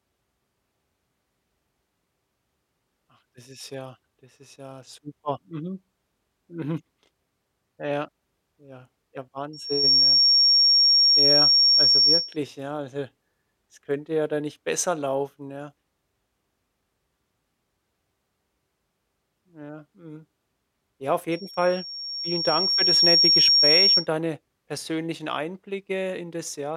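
Right after "ja ja", at 9.53 s, a loudspeaker feedback squeal takes over: a microphone is hearing its own loudspeaker, and near 5.5 kHz the loop gain tops unity, so that tone feeds itself. It swells in under half a second, sits roughly 10 dB over the speech, and stops at 12.37 s before "ja also es hä". A second squeal at the same pitch runs from 21.31 s to 24.07 s, rising more slowly over about a second and a half and ending before "deine persönlichen". A spectrogram shows a bright horizontal line at 5.5 kHz, and the waveform's envelope bulges upward across each span.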